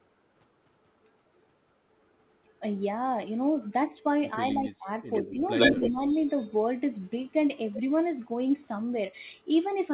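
From 4.38 to 4.88 s, at 5.1 to 5.45 s and from 5.72 to 6.07 s the voice dips by about 15, 5 and 10 dB, in pieces, likely speech suppressed in double talk: the canceller ducks the talker while the far side speaks. What is likely an echo leak overlaps at 5.13 to 5.35 s and returns at 5.58 to 5.91 s and 7.73 to 7.81 s. It is a copy trailing by 90 ms, about 10 dB under the voice, then about 5 dB above it, then faint. That fixed lag sets it apart from room reverberation.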